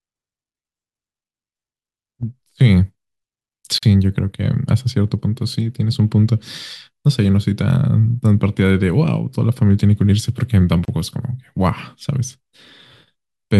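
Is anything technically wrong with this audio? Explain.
Yes. Two gaps at a join of encoded pieces break the speech, at 3.78 s (about 45 ms) and 10.85 s (about 30 ms). Separately encoded segments were joined untrimmed, keeping encoder start delay and last-frame padding, so brief silences with smeared edges cut in before speech resumes exactly where it stopped.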